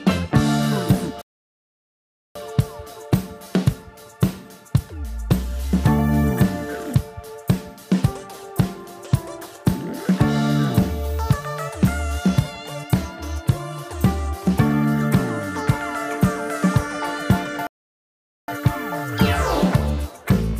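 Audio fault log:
1.22–2.35 s and 17.67–18.48 s, playback stall. The sound stops mid-flow and the output goes silent, first for about 1.14 s, then for about 0.81 s. Each gap is a dead drop to nothing rather than a fade. The audio then resumes. The likely cause is the player running short of data or its playback thread being held up. Nothing reaches the output until it catches up.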